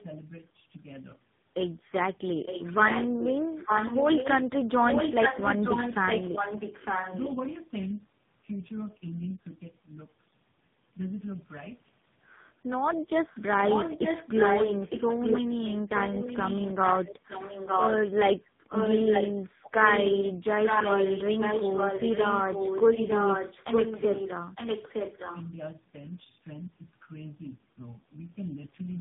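Throughout, tandem speech coding leaves the speech rough, muffled and warbly, with nothing above 3.8 kHz. The damage is heavier than any single narrowband codec, which points to several coders in a row. From 2.45 to 4.4 s and again from 4.88 to 7.36 s, an echo leak brings back a distinct copy of the speech about 0.91 s late and only about 5 dB quieter, likely from a loudspeaker echo that one side's canceller missed. Because the copy is separate and clearly delayed, it cannot be room reverberation.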